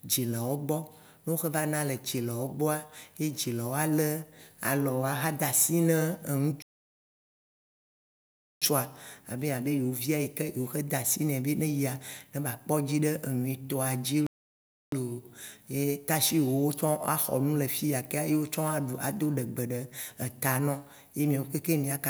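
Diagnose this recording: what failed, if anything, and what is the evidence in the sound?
A playback stall, likely the player starving of data, silences speech mid-flow from 6.62 to 8.62 s and 14.27 to 14.92 s, then it resumes.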